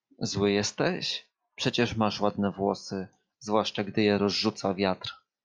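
Nothing technical stands out in this short bit of speech, so there's no fault to point to here.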